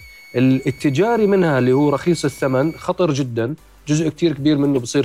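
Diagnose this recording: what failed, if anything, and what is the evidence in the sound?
A switching power supply in the analogue stage has fallen into an audible burst mode or is beating with another supply, coupling a switching supply whistle onto the signal. From 0.0 to 2.85 s a thin tone around 2 kHz, roughly 25 dB below the signal, wanders between 2.19 and 2.29 kHz as the supply's load shifts.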